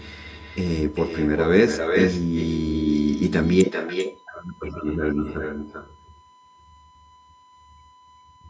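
USB whine runs throughout the speech: a steady 1 kHz tone, about 35 dB below the voice, from the bus's 1 ms frame activity leaking through the power or ground. Echo with no canceller is also present throughout: the far end's loudspeaker feeds back into its microphone, so every phrase returns roughly 0.4 seconds later, about 7 dB quieter and thinner.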